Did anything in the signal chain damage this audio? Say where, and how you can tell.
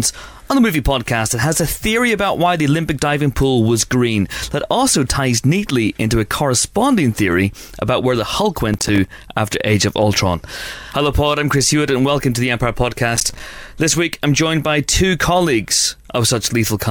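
Yes. Processor overload crackle damaged the audio at the driver/buffer stage, in two bursts: 8.73 to 9.13 s and 13.16 to 13.40 s. Each burst is a gritty crackle made of rapid dropouts to silence with hard edges, and the spacing of the clicks fits buffers of around 5 ms. The processor repeatedly failed to fill each buffer in time, roughly fifteen misses in the first burst and about ten in the second, and each miss left a brief silent hole.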